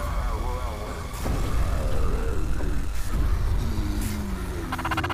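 A DECT cordless phone buzz runs through the whole clip. It is a steady, thin buzz at 100 Hz, rich in harmonics. A nearby DECT handset or base sends radio bursts every 10 ms. The audio circuit rectifies them. The buzz sits well below the main sound.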